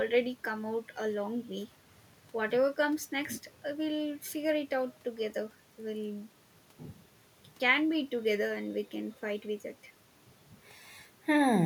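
No technical faults are audible.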